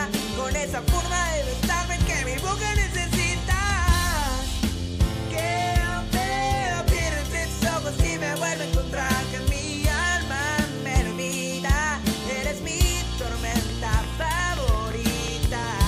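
A train of clicks, about fifteen regular pulses at 5.67 per second, ticks over the audio from 13.52 to 15.82 s, roughly 10 dB above it, likely from equipment interference.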